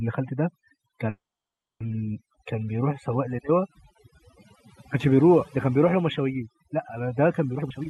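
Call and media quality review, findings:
Call and media quality review, findings:

Overdone noise removal, throughout the speech: background pulled down with twinkling specks. Noise suppressor set too aggressive, cutting individual frequency bands close to its noise estimate and taking quiet voice components with them.

Call audio freeze, 1.09–1.82 s: brief continuation of the preceding sound decaying into about 0.63 s of silence, then playback resumes where it stopped. Likely jitter buffer underrun from delayed packets. The 0.71 s gap is inserted, nothing lost, and latency increases by 0.71 s.

Jitter buffer speed-up, 7.54 s to end: speech hurried to 182% speed with pitch unchanged. The receiver is draining excess buffered audio by cutting many short pitch-period segments in succession, around 0.3 s removed in total.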